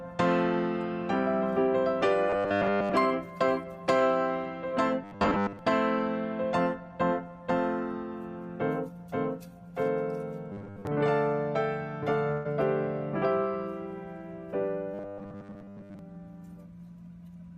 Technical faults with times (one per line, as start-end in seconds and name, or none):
2.30-2.93 robotic sound from repeated short buffers
5.04-5.59 robotic sound from repeated short buffers
10.52-10.87 robotic sound from repeated short buffers
12.31-12.47 burst of packet loss
14.94-15.99 robotic sound from repeated short buffers